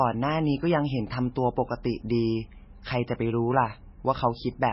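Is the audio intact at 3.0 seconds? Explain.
No. At 3.0 s, as across the whole speech clip, the sound is watery and swirly with smeared consonant attacks, likely from MP3 compression at a starved bitrate, roughly 16 kbps. A spectrogram shows a flat ceiling at 5.6 kHz and flickering holes where weak components drop out.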